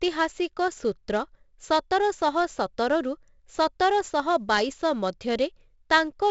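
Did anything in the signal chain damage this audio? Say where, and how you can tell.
Yes. Throughout, the speech carries a gritty hiss that rides on every loud syllable, consonant attacks smear, and nothing sounds above 7.7 kHz. That points to 4-bit ADPCM compression at the codec stage, fitting roughly 64 kbps, with coarse adaptive steps that cannot track sharp onsets.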